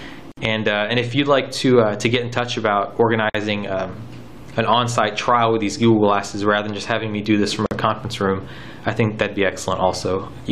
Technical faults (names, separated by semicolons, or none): gap at a join of encoded pieces